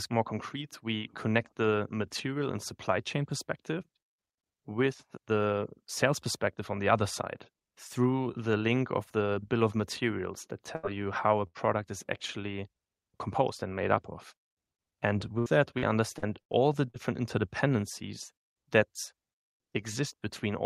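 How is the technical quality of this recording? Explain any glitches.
The recording has three packet-loss glitches, two short dropouts and one choppy stretch.

At 10.75 to 10.86 s, after "bill of materials that", and at 11.47 to 11.58 s, after "you how a", there are bursts of packet loss. About 80 ms vanishes each time. The receiver stretches the last sound into a fading buzz or hiss, then jumps ahead.

From 15.39 to 16.97 s, just before "interdependencies that", repeated packet loss makes the speech robotic. It sounds like about six holes, the longest 70 ms. Each is patched with continued sound, so it turns choppy with pieces missing.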